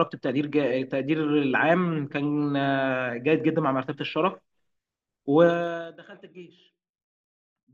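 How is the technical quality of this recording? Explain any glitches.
The speech has one glitch, during a level drop. From 5.45 to 6.00 s there is zipper noise: the gain falls about 25 dB in coarse 2 dB steps, roughly thirty per second. Each unsmoothed step clicks, giving a buzzy ticking.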